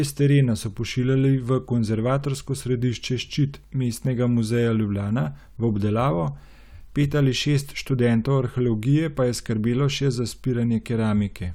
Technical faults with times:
none

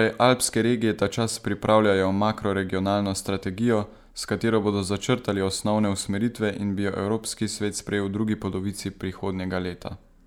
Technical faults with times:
none

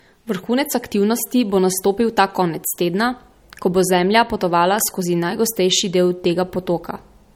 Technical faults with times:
0.00-7.35 low-bitrate audio saved at a high bitrate

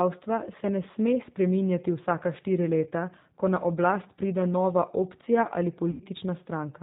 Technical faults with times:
0.00-6.83 G.729 codec
5.91-6.03 VoIP packet loss concealed by the speech codec

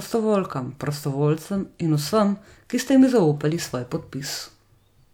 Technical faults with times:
none

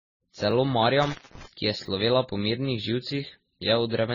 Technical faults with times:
0.00-4.14 transcoding between lossy codecs
0.51 repeated buffer
1.03-1.46 intermittent contact
1.86 repeated buffer

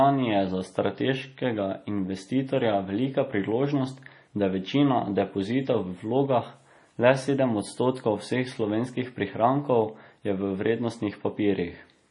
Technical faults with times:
0.00-12.11 MP3 compression

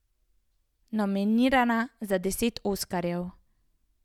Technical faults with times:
none

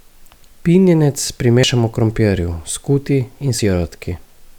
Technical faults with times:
1.63 audio missing between chunks
3.59 audio missing between chunks

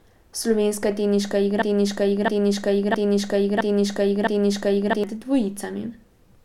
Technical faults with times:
1.62-5.04 broken-record loop

